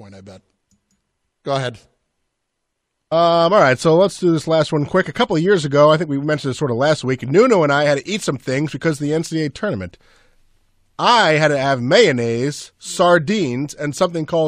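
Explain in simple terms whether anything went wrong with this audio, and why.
Nothing went wrong with the technical side of this speech recording: the signal holds steady throughout, with no interruptions, jumps or damage to the sound at any point.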